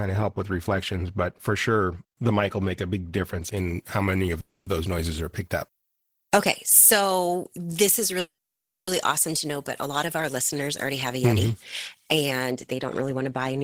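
From 3.57 s, right after "make a big difference", until 12.51 s, just before "they don't", the speech turns thin, bright and hissy on its sibilants. This is pre-emphasis left on: a treble boost following the 75 µs FM curve was applied and its matching de-emphasis never undid it, leaving 10 kHz about 13 dB above 1 kHz. Unlike a narrow presence bump or harsh compression, the lift rises steadily with frequency, so the whole upper band tilts upward.

Within that stretch, at 4.40 to 4.67 s, the sound stalls and is stretched into a fading buzz for 260 ms, then resumes exactly where it stopped. At 8.19 to 8.88 s the same happens for 680 ms, with the fill dying away to silence for 570 ms of it. These are call audio freezes, likely from delayed packets draining the jitter buffer. What separates them from ordinary dropouts is that nothing is lost. The audio simply arrives later, and each freeze pushes the delay back by its own length.

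After "they don't", from 13.01 s to 13.58 s, the speech hurries to 108% of its normal rate, shedding roughly 50 ms in total. This is a jitter buffer speed-up: the receiver trims many pitch-period slices in quick succession to catch up on the built-up delay. The pitch stays put, which distinguishes it from a playback-speed change, where the pitch would rise along with the tempo.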